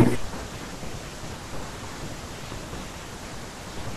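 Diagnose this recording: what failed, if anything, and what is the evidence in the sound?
A voltage step in the analogue wiring, likely from static or a switch, adds one loud pop at 2.52 to 2.54 s, a few decibels above the ongoing speech.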